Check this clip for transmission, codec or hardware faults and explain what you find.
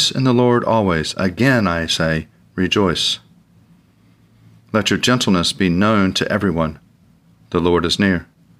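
No transmission, codec or hardware faults turn up in this clip.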